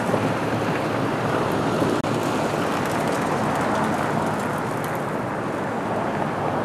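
At 2.01 s there's a gap at a join of encoded pieces: a 30 ms hole where separately encoded chunks were butted together untrimmed, so the encoder's padding silence stays in.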